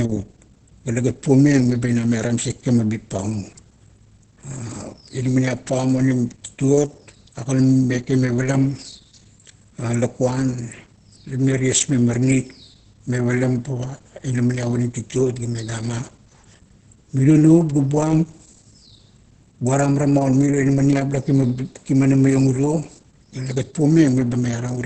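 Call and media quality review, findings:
Muffled, hoarse speech throughout, with a flat spectrogram ceiling at 8.6 kHz. Likely Opus compression in heavy speech (SILK) mode, consistent with a rate of around 12 kbps.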